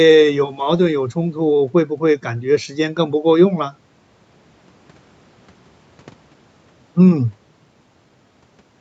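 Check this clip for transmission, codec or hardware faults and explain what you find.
No transmission, codec or hardware faults.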